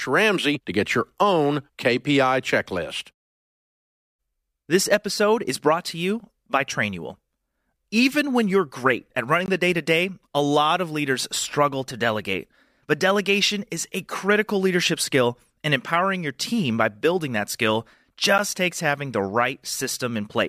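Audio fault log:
9.46–9.48 s and 18.38 s, block of digital silence: the speech drops to silence for 20 ms and then for 10 ms. It cuts out and back in with no fade, so the 10 ms gap sounds like a tick. The first is twice as long and reads as a tiny pop-hole. The background noise floor drops out during both gaps, which distinguishes these from a fade-style dropout or a dip in level. The likely cause is an output buffer left unfilled in time.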